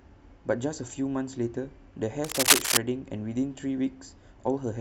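Around 2.24 s the speech picks up a burst of cable scratch noise that runs to about 2.77 s, roughly half a second of dense, ragged crackle sitting well on top of the voice, about 10 dB above it. It sounds like scratchy rustling laid over the sound. The likely cause is a worn cable or connector being moved, so the contact resistance keeps jumping around and throws uneven bursts of noise into the signal.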